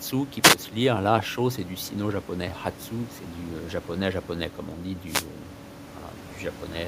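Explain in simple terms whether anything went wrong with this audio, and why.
Twice the speech is briefly swamped by a swish of static, a wireless microphone noise hit: from 0.42 to 0.56 s, just before "se lire", and from 5.05 to 5.28 s, right after "euh comme on dit". The microphone's radio signal faded for a moment, so receiver hiss rose and covered the sound. Unlike a digital dropout, the audio doesn't go silent or stutter. It's buried in noise, and the steady room noise underneath stays separate.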